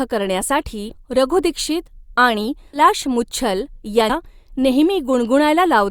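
At 0.89 to 0.94 s, just before "रघु दीक्षित आणि", the speech jumps forward by about 150 ms because compressed frames were skipped. At 2.73 to 2.80 s, right after "करण्यासाठी रघु दीक्षित आणि", it skips about 200 ms. At 4.09 to 4.12 s it skips about 700 ms. Each jump fits a whole number of 20 ms frames. On a waveform the envelope breaks abruptly. A spectrogram shows harmonics cut off mid-contour and restarting elsewhere.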